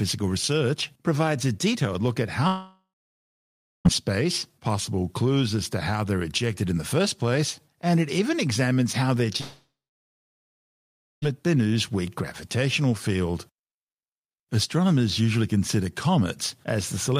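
A likely long network dropout stops the audio arriving twice, from 2.47 to 3.87 s and from 9.41 to 11.24 s. Each time the speech smears into a fading buzz, then near-silence for about 1.0 s and 1.5 s, and resumes with the gap lost.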